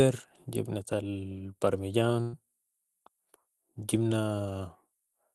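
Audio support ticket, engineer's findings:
Burst of packet loss, 2.21–2.35 s: about 120 ms of audio lost in transit. The receiver filled the gap by stretching the last sound and fading it. Spectrogram shows smeared, decaying texture ending in an abrupt restart. Waveform shows a tapering envelope with no drop to zero.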